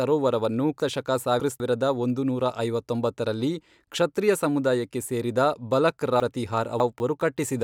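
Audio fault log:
0.80–1.60 s: chunks out of order. A 200 ms piece plays three pieces late, just before "ಒಂದುನೂರಾ ಐವತ್ತೊಂಬತ್ತರಲ್ಲಿ ಕ್ಷತ್ರಿಯ ಸಮುದಾಯಕ್ಕೆ". The speech sounds jumbled, with hard joins.
6.20–7.00 s: chunks out of order. Again a 200 ms piece arrives three pieces late. Nothing is missing, but the scrambled order garbles the speech.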